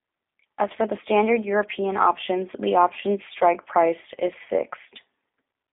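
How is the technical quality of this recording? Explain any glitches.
The technical quality is poor: G.729 codec damage is plainly audible for the whole clip of speech. The sound is confined to a telephone line band of roughly 250 Hz to 3.6 kHz, with nothing above 3.7 kHz. The codec resynthesises each 10 ms frame from a vocal-tract filter, a pitch predictor and a few pulses, which fits an 8 kbit/s stream. The result is a rough, slightly synthetic timbre. That rebuilt texture, not just the missing highs, sets it apart from a clean telephone band limit.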